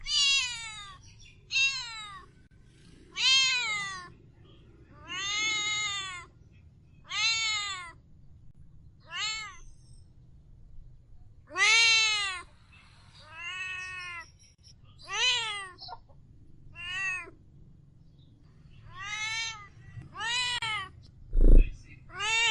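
At 2.47, 8.51, 14.55 and 20.58 s, a gap at a join of encoded pieces opens: 40 ms, then 37 ms silences every 6 s, where separately encoded segments kept their start delay and end padding. Each shows as a vertical blank stripe with smeared edges across the spectrogram, a flatline in the waveform, before the sound resumes unchanged.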